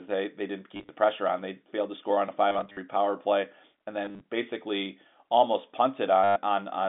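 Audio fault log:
0.75–0.89 s, 2.49–2.77 s, 4.05–4.21 s and 6.24–6.36 s: packet loss with last packet repeated. Chunks went missing and the receiver replayed the last good one to cover each gap. The first three are scattered dropouts with runs of 30 to 50 ms, and the last is a solid 120 ms. The stutter fits 10 ms packets, so any run buzzes around 100 Hz. It all rides over a narrow 200 Hz to 3.6 kHz telephone band.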